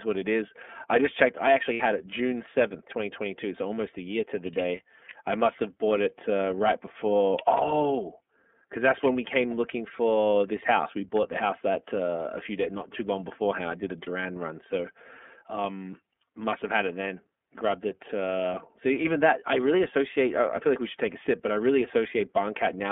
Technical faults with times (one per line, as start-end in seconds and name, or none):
0.00-22.91 iLBC codec
1.73-1.81 lost iLBC frames
4.62-4.65 lost iLBC frames
14.04-14.10 lost iLBC frames